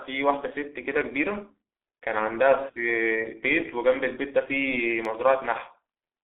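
Speech runs through the G.723.1 codec for its whole length, with heavy codec damage. The audio sounds muffled and hoarse, and consonants smear because the codec rebuilds the voice from a coarse model updated only once per 30 ms frame, a heavy data reduction that fits roughly 6.3 kbit/s. On a spectrogram, energy stops sharply at 3.5 kHz and thins below 300 Hz, with blocky, smeared harmonics; the waveform looks smoothed and lacks sharp transients.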